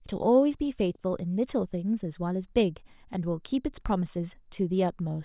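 No technical faults can be heard anywhere in the recording; the signal stays continuous and steady throughout.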